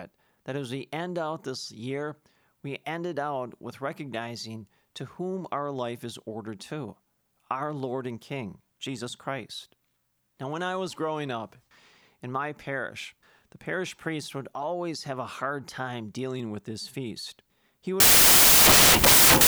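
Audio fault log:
18.00–19.48 s, samples built from the wrong bytes: the speech gives way to loud, harsh broadband noise running to the end, because each sample is assembled from misordered bytes, letting the fast-flickering low bits dominate.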